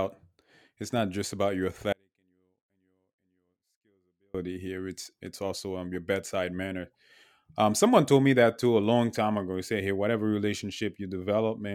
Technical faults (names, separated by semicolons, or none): audio dropout to a faint residue